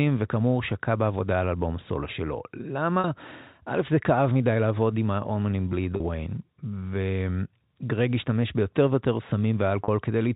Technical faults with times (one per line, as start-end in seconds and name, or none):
3.00-3.04 packet loss with pitch repetition
5.96-6.00 packet loss with pitch repetition
9.84-9.88 packet loss with pitch repetition